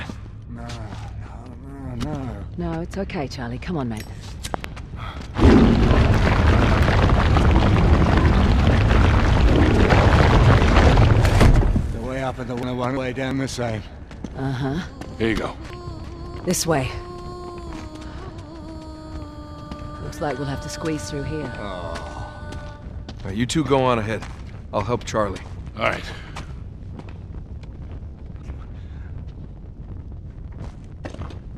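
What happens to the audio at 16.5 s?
Right at 16.51 s a single loud pop cuts in, lasting only until about 16.53 s. It's a short, sharp crack, peaking somewhere around 15 dB above the surrounding level, and the sound carries on underneath as if nothing happened. That's the signature of a sudden voltage spike getting added to the signal, likely from a switch, a plug connection or a bit of static discharge, which the downstream circuitry then smooths into that brief thump.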